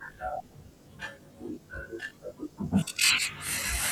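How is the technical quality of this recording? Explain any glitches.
The recording has one fault, present throughout the speech. Channel delay (comb filtering) runs from start to end. One channel lags the other by roughly 20 ms, and the two are summed to mono. Shared content cancels at evenly spaced frequencies, starting near 30 Hz. The speech sounds rough or slightly doubled.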